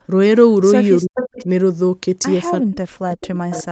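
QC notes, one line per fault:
1.01–1.18 s and 2.6–3.71 s, speech suppressed in double talk: the voice sinks by about 40 dB, likely the echo canceller ducking it during crosstalk. Sound goes missing rather than being added.
1.15–1.45 s, 3.22–3.27 s and 3.51–3.59 s, echo leak: a delayed copy trails the voice by 372 ms, about 10, 25 and 15 dB below it, likely loudspeaker echo slipping past cancellation. A repeat is added, not removed.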